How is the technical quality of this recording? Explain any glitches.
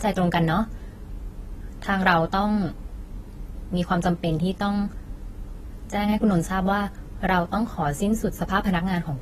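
The recording is held back by audible AAC compression running the whole way through. Nothing survives above 14 kHz, and the dull, warbly texture on speech likely comes from AAC-LC squeezed to around 32 kbps.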